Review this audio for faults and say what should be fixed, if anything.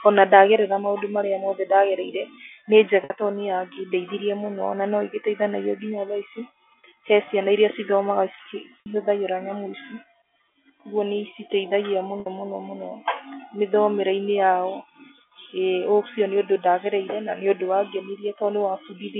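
Packet loss with pitch repetition occurs at 3.04 s, 8.8 s and 12.2 s, each gap about 60 ms, which fits three 20 ms packets. The receiver loops the last pitch period, so the speech briefly holds as a buzzy tone fading over about 50 ms. A plain dropout would cut straight to silence instead. To prevent it, reduce network loss with QoS prioritisation or add a jitter buffer with forward error correction. The G.711 narrowband line limit of 300 Hz to 3.4 kHz is audible but normal for this coding.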